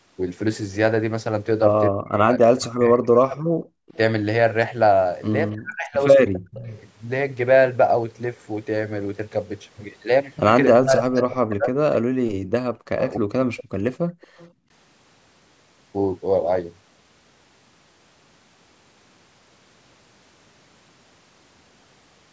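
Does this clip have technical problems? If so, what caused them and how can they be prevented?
Yes. The speech repeatedly dips and breaks apart in two stretches, 1.9 to 6.74 s and 10.7 to 13.3 s, falling by up to about 40 dB in pieces that add up to around two seconds in the first stretch and one second in the second. This is speech suppressed in double talk, likely because both sides talked at once and the echo canceller, unable to tell the local talker from the loudspeaker echo, turned everything down. Tuning the canceller for full-duplex double-talk handling, or using a headset so little echo reaches the microphone, prevents it.

The room sound also drops out abruptly, briefly from 3.8 to 3.88 s and in patches between 12.01 and 14.7 s totalling about a second, falling by about 36 dB before recovering. This is background gated by the echo canceller: while the far end's audio played on the loudspeaker, the canceller clamped the microphone hard and released it only when that playback stopped. 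Lowering the suppression depth, or adding comfort noise so the background doesn't vanish, avoids these holes.

A faint, delayed copy of the speech trails behind it from 3.88 to 6.39 s and again from 10.65 to 14.51 s, lagging by 249 ms and sitting about 20 dB below the main signal. This is echo leak, likely because one end has its call on a loudspeaker, and its echo canceller didn't remove everything its microphone picked up, so the remainder was sent back. The band limit at 8 kHz is simply the call's normal microphone processing. Using headphones at the loudspeaker end, or lowering its playback volume, stops the leak.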